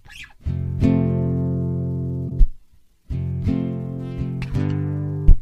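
Damaged data in a compressed stream shows up from 2.26 to 2.32 s in this audio as a short chirp or blip lasting about 50 ms. At that point some bytes of the encoded file were lost, zeroed or overwritten, so the decoder could not parse those frames correctly. It lost its place in the bitstream and emitted garbled output while it searched for the next valid frame header, then resumed clean playback once it had resynchronised.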